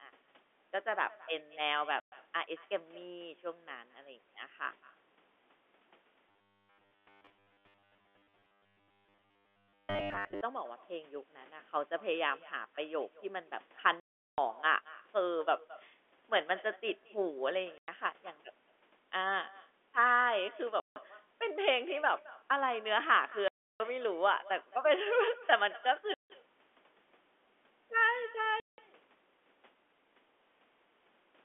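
From start to finish, every phrase is trailed about a fifth of a second later by a faint, thin copy about 21 dB below the speech. This is echo with no canceller: the far end's loudspeaker feeds its microphone and the sound returns uncorrected.

At 2.0 s, 14.0 s, 17.78 s, 20.8 s, 23.48 s, 26.14 s and 28.6 s, the speech drops into dead silence with hard edges, for gaps of 120, 380, 100, 160, 320, 160 and 180 ms. This is packet loss filled with silence. The gaps are all multiples of 20 ms, which fits 20 ms packets.

From 6.29 to 10.42 s, the speech becomes a rigid, metallic 100 Hz buzz that still roughly tracks the phrasing. This is robotic sound from repeated short buffers, likely caused by the receiver looping a 10 ms slice when new audio arrives too seldom, with most of that stretch repeated rather than fresh.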